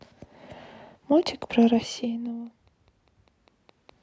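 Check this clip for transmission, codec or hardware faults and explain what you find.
One hardware-type fault is present in this speech. From 1.23 s to 3.90 s a train of clicks runs under the speech at a regular 4.9 per second, about fifteen in all, each peaking at roughly the speech level. The sound is a steady ticking that continues through pauses, with every click much the same shape. The cause is likely electrical interference or an interface periodically injecting identical pulses. The level shifts near 1.5 s and 3.0 s come from the talker moving relative to the microphone.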